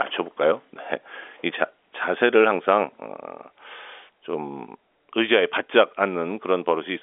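Nothing is technically wrong with this speech clip, which carries the narrow band of ordinary G.711 telephone coding.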